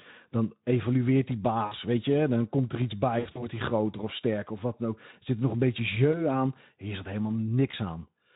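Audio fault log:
1.65–1.74 s, 3.19–3.49 s, 6.11–6.23 s, 7.71–7.76 s: VoIP packet loss concealed by the speech codec. The Speex decoder extrapolates missing frames, so sound stretches into a fading buzzy tone or coloured noise and stays weak until recovery.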